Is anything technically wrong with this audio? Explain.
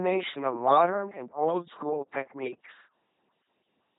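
Yes. The whole clip has gone through an LPC-10 vocoder, and heavily. Each moment of the speech is rebuilt from a simple filter driven by either a buzzy pulse train or hiss, so it sounds robotic and mechanical, with nothing above 3.8 kHz. That fits a 2.4 kbit/s link.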